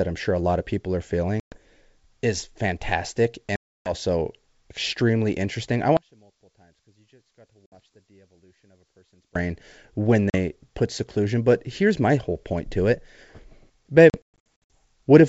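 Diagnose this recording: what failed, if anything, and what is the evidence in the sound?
Network stage: packet loss on an ADPCM call, with silent holes at 1.40, 3.56, 7.66, 10.30 and 14.10 to 14.71 s. Each returns slightly distorted while the decoder's predictor re-syncs.

Audio dropout to a faint residue from 5.97 to 9.35 s, after "extremely interesting I". The sound cuts abruptly to a faint residue about 30 dB down, likely an upstream break.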